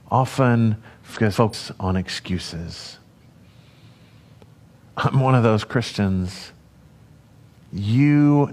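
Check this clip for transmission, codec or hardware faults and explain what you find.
Two stretches of frames out of order disrupt the speech, from 1.13 to 1.54 s, just before "on excuses", and from 3.06 to 3.44 s, right after "on excuses". In each, two neighbouring blocks of about 186 ms, which fits runs of four frames, were decoded in swapped order, so the halves play back to front. This produces a garbled flutter. Unlike a dropout or skip, nothing is missing and timing stays intact.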